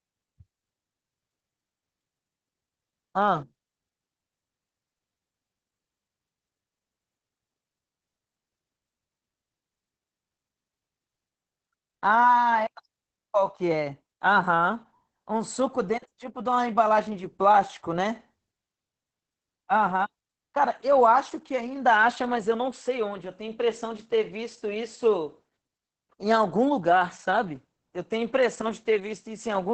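Opus voice compression runs through the whole clip. The coder appears to be in its SILK linear-prediction mode, with the band cut off at about 8 kHz. The speech loses its upper air and sounds muffled. The excitation is coded coarsely, so the voice turns hoarse and slightly robotic. The damage is heavy, at a bitrate near 10 kbps with 20 ms frames.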